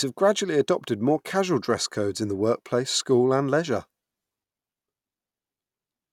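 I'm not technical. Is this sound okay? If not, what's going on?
Yes, it sounds fine.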